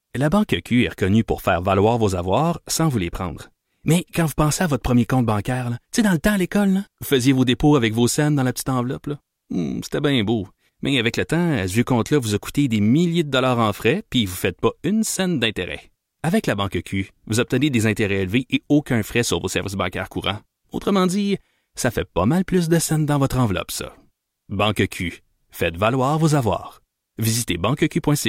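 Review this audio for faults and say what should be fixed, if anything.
Nothing stood out on listening, so there is nothing here that needs fixing.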